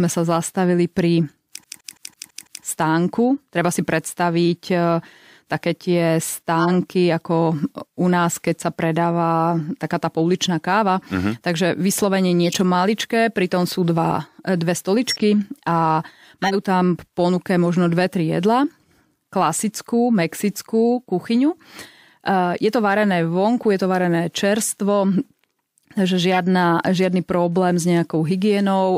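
Speech with two faults. From 1.64 to 2.64 s the CD is stuck on one turn: a scratch sends the laser back a track each revolution, so the same 166 ms slice repeats six times, with a brief mute at every jump, producing an even, rapid stutter. Corrupt frames are decoded at 6.59, 12.44 (just before "maličké pritom sú dva"), 15.07 (after "pritom sú dva dve"), 16.42, 21.82 and 26.32 s (before "žiadny problém s nejakou"). In each, flipped bits in one to a few compressed frames misplace spectral energy, giving short chirps and noise bursts. Most are loud, with the one at 21.82 s much fainter.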